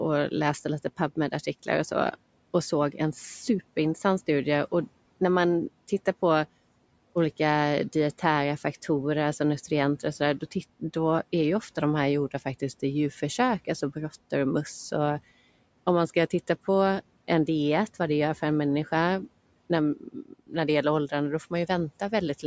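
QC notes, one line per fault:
19.96–20.55 s, speech cut by the noise suppressor: right after "för en människa när" and before "det gäller", the suppressor mistook low-level speech for background and pulled it down along with the room noise, which sits about 23 dB below the voice. Roughly 0.3 s of the span is affected, with the deepest dip about 18 dB, so the affected speech sounds swallowed and faint before full level returns.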